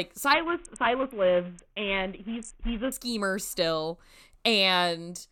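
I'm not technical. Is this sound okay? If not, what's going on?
No. From 0.33 to 2.92 s the speech turns dull and gritty: a Bluetooth SBC bit pool drop, where a crowded wireless link forced the phone to squeeze the sound into far less data. Unlike a dropout, the audio never stops; it just coarsens, then clears.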